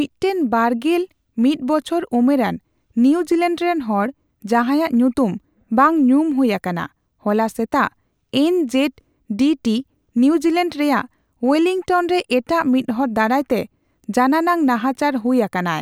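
Nothing technical stands out in this speech recording; it simply runs along without any fault to point to.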